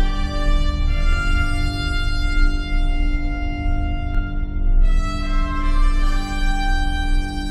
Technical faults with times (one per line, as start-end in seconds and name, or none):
1.13-4.15 doubled audio track